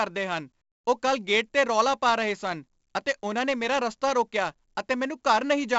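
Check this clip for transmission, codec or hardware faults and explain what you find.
One codec fault runs through the whole speech recording.

Throughout, a gritty hiss rides on loud syllables, attacks sound rough and nothing exceeds 7.7 kHz. The cause is heavy 4-bit ADPCM compression, consistent with a 64 kbps stream, whose coarse predicted steps leave noise that tracks the speech.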